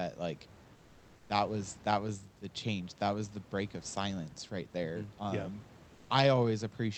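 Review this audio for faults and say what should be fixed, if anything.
From 5.93 to 6.09 s, about 160 ms of the room noise is replaced by comfort noise. The real background, sitting about 28 dB below the loudest speech, gives way to a smooth, featureless hiss only about 1 dB quieter, so the level barely dips. The likely cause is discontinuous transmission in the Opus call path: the sender's voice detector stopped sending audio, and the receiver synthesized noise to fill the pause. A dropout or noise gate would leave silence or a clear drop in level. Here the pause keeps a steady noise floor that simply loses the texture of the room, whose own noise lies about 26 dB under the speech. To prevent this, disable DTX on the sending side, or set its voice-activity threshold below this room's noise level.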